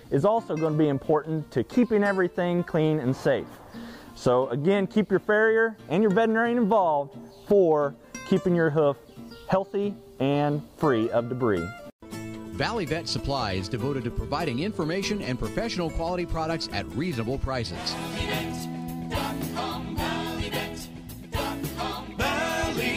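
No technical faults are audible.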